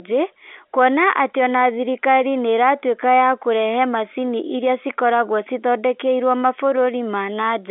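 Speech over a telephone line, with no technical faults.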